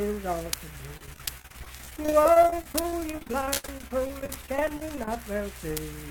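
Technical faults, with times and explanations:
0.97–5.16 s: repeated packet loss (robotic sound). Dozens of short dropouts, the longest about 68 ms, are patched by stretching the preceding sound, covering roughly a quarter of the span and giving choppy output with pieces missing. Spectrograms show smeared, repeated frames between abrupt breaks.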